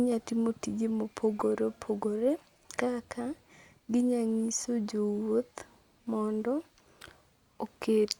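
At 1.39 to 1.42 s, between "timo tije" and "opogore kaka", a corrupt frame decoded fault cuts into the speech. Flipped bits in a few compressed frames were decoded as if valid, so misread gains and codes scatter energy onto the wrong frequencies for about 24 ms. It sounds like a short chirp, squeak, blip or burst of noise peaking near -15 dBFS. On a spectrogram it shows as a brief vertical smear that breaks the harmonics, and on the waveform as a jagged burst.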